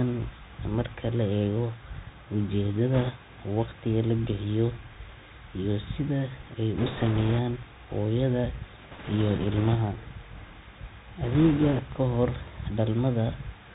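Speech heard through a Bluetooth CVSD headset codec: nothing reaches above 4 kHz, s sounds are scratchy and a granular hiss sits underneath, unlike the smooth muffling of a plain low-pass filter. Bit errors on a Bluetooth voice link, at a few percent, add bursts of rushing crackle rather than sharp clicks, at 2.94–3.10 s just before "waqtiga la bixiyo", 6.78–7.40 s just after "iyo sida ay", 8.91–9.75 s and 11.23–11.80 s.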